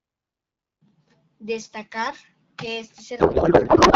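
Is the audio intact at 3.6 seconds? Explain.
No. From 3.19 s to the end, right after "que este", a codec payload misread turns the sound into garbled noise and warble. The frames packed octet-aligned are decoded as bandwidth-efficient AMR, so every field is read from the wrong bits. Low-bitrate roughness would still track the speech, but this warble barely follows it.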